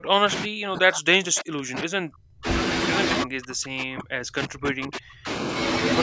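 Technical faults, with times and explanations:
0.00–2.47 s and 3.24–5.28 s, speech suppressed in double talk: the speech is pumped down by as much as about 40 dB, likely from an echo canceller muting during overlapping talk, unlike abrupt packet-loss gaps.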